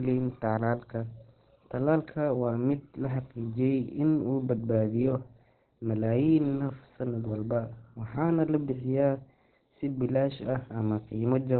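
Throughout, the speech is muffled and hoarse, the spectrogram empty above 4.2 kHz: likely heavy Opus compression, a very low bitrate forcing narrowband speech mode.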